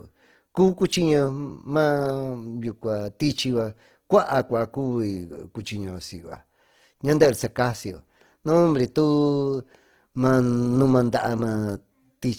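Start to finish the speech sounds grainy and rough, likely Opus compression filling starved bands with noise, which fits about 16 kbps.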